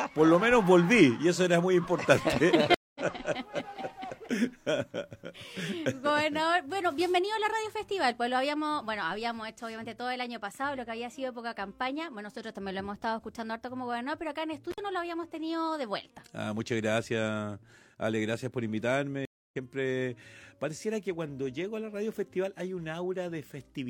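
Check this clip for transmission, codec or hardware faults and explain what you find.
There are three faults: two stream reconnects and one intermittent contact.

Stream reconnects at 2.74 to 3.01 s and 19.25 to 19.56 s: the connection dropped, leaving about 208 ms and then 262 ms of silence. A fresh decoder picked up mid-stream, so the sound jumps ahead, roughly a fifth then three tenths of a second.

Intermittent contact at 14.71 to 14.78 s: a loose plug or cable opened for about 62 ms. The sound cuts out with crackle at both edges, and faint hiss remains while the line is open.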